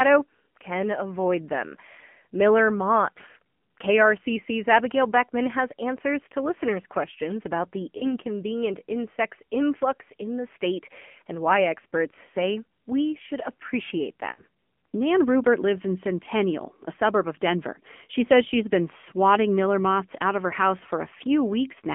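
Throughout, the speech passes through an AMR narrowband mobile codec. Nothing below 200 Hz or above 3.4 kHz survives. The coarse vocal-tract model leaves the voice plainly buzzy and synthetic, which fits the low 7.4 kbps mode.

There are two lost AMR speech frames events. At 7.98 s, after "listeners' questions about the", a short warbling dip fits one 20 ms frame concealed by the decoder. At 14.32 s, after "say we should appreciate", about 60 ms is smeared and fading, then comes back rough.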